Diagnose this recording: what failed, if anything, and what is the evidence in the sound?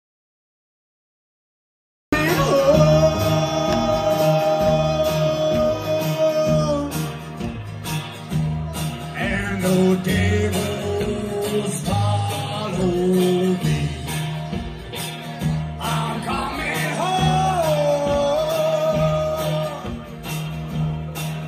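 The clip opens with an audio dropout to silence. From the very start to 2.13 s there is nothing at all, not even room tone or hiss. The sound then enters abruptly, already in mid-flow, with no fade. That dead, silent gap points to the input stage rather than the source. The likely cause is a lost link between the input device and the recorder, which kept writing zeros until the signal returned. Whatever preceded 2.13 s is gone.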